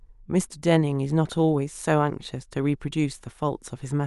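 No technical faults can be heard anywhere in the recording; the speech signal stays steady and intact for its whole duration.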